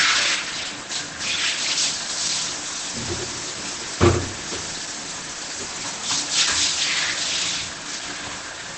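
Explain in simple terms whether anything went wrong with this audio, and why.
Something did go wrong, across the whole clip: the sound is muffled and hoarse, with nothing above about 8.4 kHz. That is likely heavy Opus compression in its speech-oriented mode. Unlike simple treble loss, what remains is also hoarse, not merely dull.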